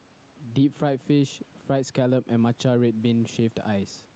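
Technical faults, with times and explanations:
Throughout, gain pumping: the gain swings by around 10 dB. The room noise sits about 37 dB below the speech. Loud and quiet syllables sit unnaturally close in level, so the speech sounds squashed. The likely cause is input gain set far too high, with a fast limiter pulling the level down on each loud sound.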